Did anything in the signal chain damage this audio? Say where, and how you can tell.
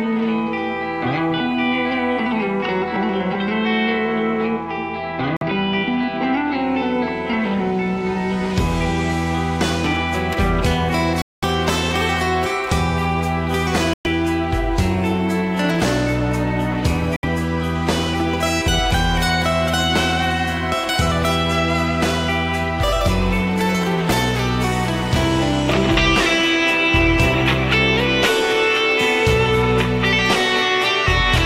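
Yes. The sound cuts to silence four times: 5.37 to 5.43 s, 11.22 to 11.44 s, 13.93 to 14.07 s and 17.16 to 17.25 s. The gaps have abrupt edges or a fade of a few milliseconds. Playback resumes further along, as though it kept running. This is likely a Bluetooth dropout, with late packets discarded.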